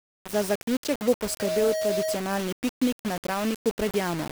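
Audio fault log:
throughout: low bit depth without dither (likely cause); gritty, grainy distortion tracks the speech, fitting 4-bit rounding; stepped waveform, broadband spectrogram haze only about 10 dB below.
1.23–2.21 s: loudspeaker feedback squeal; after "zaključek bo", a 632 Hz tone whose loop gain exceeds one swells within about 0.3 s to speech level, ending before "piknik na"; a bright horizontal spectrogram line.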